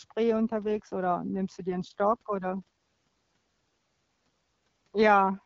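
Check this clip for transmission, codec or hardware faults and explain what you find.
One transmission fault is present: an AMR rate drop in this wideband (HD Voice) speech.

From 0.48 s to 2.67 s the AMR-WB codec was switched to a lower rate, which fits a step down from 12.65 to 8.85 kbit/s as the link weakened. Fewer bits were left to describe the voice once more went to error protection. The speech turns rougher and more synthetic there, with no gap and no loss of bandwidth, and it clears again after 2.67 s at the light-damage 12.65 kbit/s rate.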